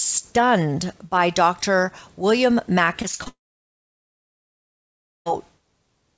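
From 3.02 to 3.28 s, repeated packet loss: four brief holes, none longer than 20 ms, are patched by repeating the preceding sound. The result is a choppy, robotic flutter rather than one clean break. Right after, from 3.28 to 5.28 s, the sound smears into a short fading buzz and then gives way to near silence for about 1.9 s, likely a long network dropout. It is one continuous loss, not a rapid stutter, and the audio resumes without the missing stretch.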